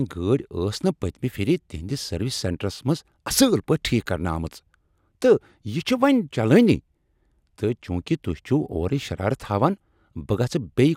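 A speech recording, and nothing technically wrong can be heard in it.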